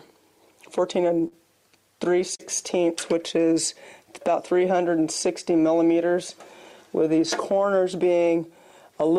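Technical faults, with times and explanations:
1.27–1.34 s and 2.35–2.42 s: short concealed packet loss. Each time about 40 ms of audio arrived too late to decode, and the receiver filled the hole by extending the preceding sound before blending back. This gives a brief smear or wobble rather than the silent gap or click of a plain dropout.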